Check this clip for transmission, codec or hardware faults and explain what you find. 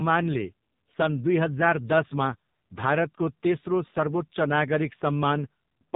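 One codec fault runs through the whole recording.

AMR narrowband mobile codec, throughout. The speech has passed through the AMR-NB mobile speech coder, which samples at 8 kHz and rebuilds the voice from a vocal-tract model excited by a few pulses per 5 ms subframe. Nothing above 4 kHz survives, so the speech sounds dull and boxed-in. The damage is heavy, with a buzzy, synthetic voice quality that fits one of the codec's lowest bit-rate modes, around 5.9 kbps.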